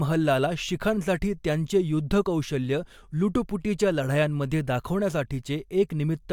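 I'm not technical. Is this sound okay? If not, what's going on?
Yes, there are no technical faults in this speech recording, so nothing needs fixing.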